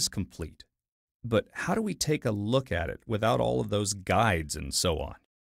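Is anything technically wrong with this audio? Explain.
No, no technical faults heard.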